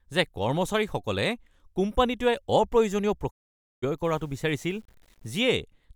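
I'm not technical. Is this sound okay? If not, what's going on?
No. There are two problems in this speech clip.

From 3.29 to 3.84 s, the sound quickly fades out and goes silent for about half a second, then comes back. That is a digital broadcast dropout: the receiver stopped getting usable data and muted itself until good data returned, so that half second of speech is simply gone. Unlike a scratchy glitch or a stutter, nothing repeats or crackles. It is a clean gap with a very short fade at the start.

From 4.04 to 5.54 s, the speech turns grainy and rough, especially on quieter parts. The likely cause is low bit depth without dither. The sound was stored with too few steps of loudness, which points to around 9 bits, and it was cut down to that level crudely. Unlike steady background hiss, this grit rises and falls with the voice itself.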